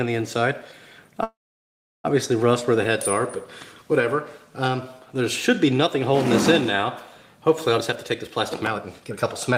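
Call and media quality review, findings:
Freeze at 1.23–2.06 s: sound stalls, brief fading buzz or hiss then about 0.7 s silence; resumes where it stopped, nothing lost. Likely call audio freeze, jitter buffer underrun adding 0.81 s delay.

Hurried audio, same pitch, 7.78–9.56 s: running at 138% speed. Jitter buffer speed-up trimming pitch periods repeatedly, roughly 0.7 s removed to cut backlog.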